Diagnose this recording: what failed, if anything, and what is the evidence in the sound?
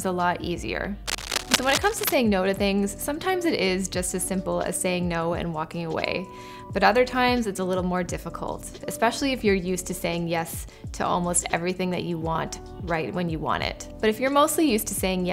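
Cable scratch noise from 1.06 to 2.17 s: dense, uneven scratching only a few decibels below the sound, likely from a worn analogue cable or connector whose contact resistance fluctuated as it moved.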